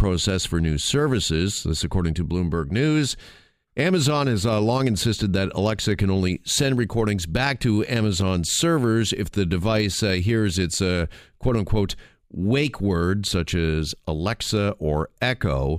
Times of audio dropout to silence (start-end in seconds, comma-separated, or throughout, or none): none